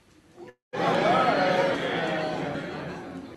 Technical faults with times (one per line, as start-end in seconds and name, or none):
0.49-0.75 long network dropout
0.95 audio missing between chunks
2.55 audio missing between chunks